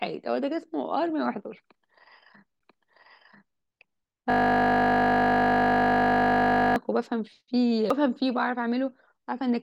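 Speech clip with two kinds of fault. A CD skip occurs twice: at 2.59 s the audio mutes for roughly 10 ms, and at 7.90 s for a few milliseconds. In each case playback resumes from a different point, heard as a tick followed by an abrupt discontinuity in the speech. This is the signature of the pickup laser being knocked off its track onto another turn of the disc spiral, after which the player briefly mutes while it relocks. From 4.30 s to 6.76 s a system hang loop takes over. A single 20 ms fragment of audio repeats exactly, over a hundred times, producing a steady 50 Hz buzz in place of the speech. The cause is the host or audio driver freezing while the sound hardware keeps cycling through its ring buffer. The very short loop period indicates a small buffer, around 20 ms.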